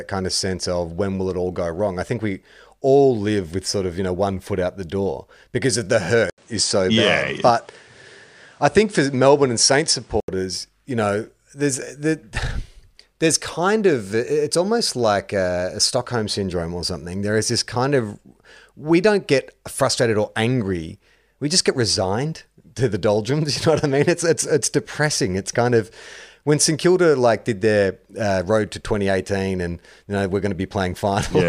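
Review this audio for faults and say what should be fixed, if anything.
From 6.30 s to 10.28 s the speech goes duller, with nothing above 10.5 kHz, after an 80 ms silence at the switch. A new background noise sits roughly 35 dB below the speech, and loudness barely changes. The likely cause is an input switched to a poorer device. The gap and the fresh noise floor distinguish it from a codec bandwidth drop, which narrows the band without changing the background. Lock the recording input so the system cannot switch devices mid-session.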